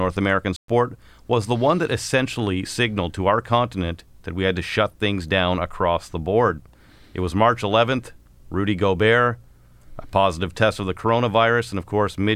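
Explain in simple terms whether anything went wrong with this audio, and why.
At 0.56 s the speech cuts to silence for 0.12 s, then resumes with "was the one that". This is a playback stall, likely from the player briefly running out of data.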